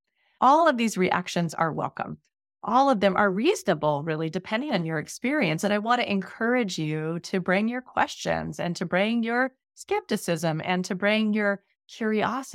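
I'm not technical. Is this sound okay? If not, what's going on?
Yes, this sound is okay, and nothing is going on with it.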